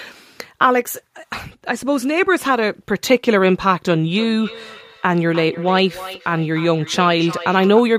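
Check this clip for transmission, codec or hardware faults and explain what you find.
One fault is present: feedback echo between two devices, from 4.14 s to 7.86 s. Speech comes back roughly 300 ms later, thinner and with a ringing edge, at its loudest about 15 dB below the speech itself. A second device in the same room is playing out what this microphone sent, and the microphone picks that playback up again. Its echo canceller only removes its own device's output, so the returning sound passes through.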